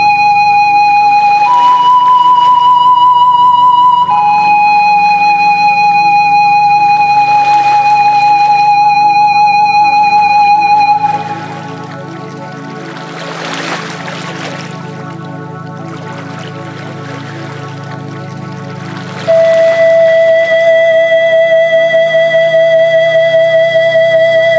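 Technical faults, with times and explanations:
Throughout, gain pumping: the gain ducks around 5 dB under loud sounds, likely excessive gain clamped by a fast limiter.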